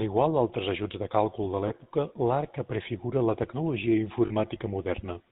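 Speech run through the GSM full-rate codec, with plainly audible damage throughout: a buzzy, gravelly roughness that fits the 13 kbps full-rate coder, which models the vocal tract and excites it with a sparse, regularly spaced pulse train. On a spectrogram everything stops at a hard ceiling at 4 kHz, and the harmonics look coarse and grainy rather than clean. There are also lost GSM frames. The first is between 1.68 and 1.72 s, after "ajuts de càlcul de" and before "l'arca prefigura la", and the second is at 4.26 to 4.32 s. At each point the decoder replayed the last good frame's parameters, giving a brief metallic ring. The first gap sounds like a single 20 ms frame and the second like about 40 ms. On a spectrogram each shows as a short stretch of frozen, smeared harmonics that doesn't follow the surrounding speech. On the waveform the same stretches show a repeating pattern.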